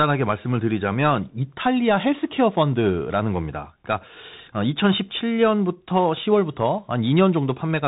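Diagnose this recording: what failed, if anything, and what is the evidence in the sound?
The speech passed through a Bluetooth CVSD headset codec, whose one-bit delta modulation has a step size that lags fast, loud high-frequency swings. Nothing above 3.8 kHz survives, throughout. Sibilants sound scratchy and a granular hiss sits under the speech, consistent with a 64 kbps CVSD link.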